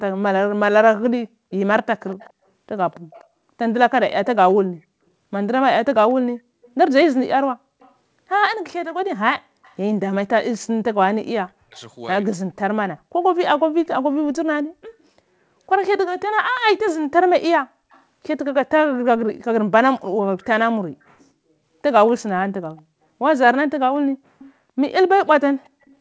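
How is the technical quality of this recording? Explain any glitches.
The recording carries two call-path faults: repeated faint echo and one stretch where the talker is pushed down during overlapping speech. The sound also stops at 8 kHz, which fits a wideband call codec.

Echo leak appears at 2.07–4.27 s, 6.1–7.92 s, 9.63–11.8 s, 17.91–18.02 s, 19.99–21.25 s, 22.77–22.82 s and 24.39–25.95 s. A faint copy of the speech trails it by 245 ms, roughly 25 to 35 dB down. The likely cause is a loudspeaker feeding the far microphone, with its canceller not removing all of it. Unlike room reverberation, this is a distinct, fixed-delay repeat.

Speech suppressed in double talk occurs between 11.2 and 12.59 s, overlapping the third echo stretch. The talker's level drops by up to about 40 dB in pieces totalling about 0.7 s, likely as the canceller, unable to separate voice from echo, attenuates both. 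Unlike a dropout, the dips follow the overlapping speech.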